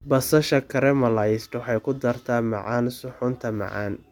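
No technical faults can be heard anywhere in this recording.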